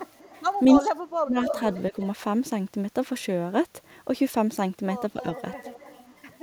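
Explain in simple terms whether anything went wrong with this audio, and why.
Yes, two things went wrong. An echo leak, likely from a loudspeaker whose echo canceller missed some sound, sends back a faint or fairly loud copy about a quarter second late, at 0.07–0.43, 0.68–0.82, 1.44–1.81 and 5.22–6.39 s. Speech suppressed in double talk, likely from the canceller turning down the talker along with the echo, makes the voice drop sharply at 0.8–1.37 s and briefly at 1.91–1.95 s.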